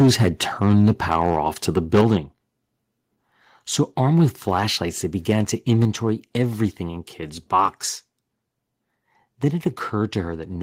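A speech recording with harsh, crackling distortion on its loudest moments, at 0.00–0.28 s, 0.65–1.40 s (ending just before "off to"), 1.77–2.15 s, 4.02–4.25 s, 4.53–4.59 s, 5.29–5.39 s and 5.72–5.85 s. The peaks are flattened, up to about 8 dB over the limit, most heavily at the start. This is likely microphone overload. The level then drops abruptly, by about 6 dB at 2.01 s and about 3 dB at 5.85 s, just before "everything in". Both drops come during or right after distorted peaks, which points to the microphone volume being stepped down, likely by the call software.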